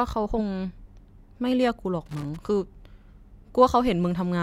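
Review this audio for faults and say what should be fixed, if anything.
Loose connector crackle appears from 2.06 to 2.37 s. A worn or dirty contact is making and breaking as it moves. That chops the speech into an irregular scratchy burst, with pops from any DC on the line. Clean or replace the connector and secure the cable so it cannot shift.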